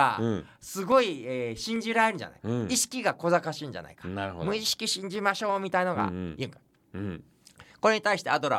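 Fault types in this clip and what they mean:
Clock drift buffer slips: A regular click recurs through the speech every 0.848 s, from 0.92 s to 8.54 s, about ten times in all. This is likely two devices running on separate clocks, differing by roughly 200 ppm, so the buffer between them slowly fills or drains until a handful of samples is dropped or repeated. Each slip breaks the waveform briefly, and the steady spacing of the clicks reflects the constant clock mismatch.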